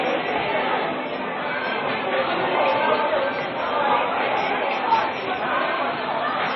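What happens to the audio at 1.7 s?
At 1.7 s the audio carries the same damage it has from start to finish: heavy MP3 compression, most likely the cause. Nothing is left above about 5.7 kHz, and the remaining sound has a watery, swirling texture with smeared attacks, which fits a bitrate near 24 kbps. The encoder lacked the bits to code every frequency line, so it cut the treble and dropped weak lines that flicker in and out between frames. That flicker separates it from a plain low-pass filter, which would dull the top end but leave the rest steady.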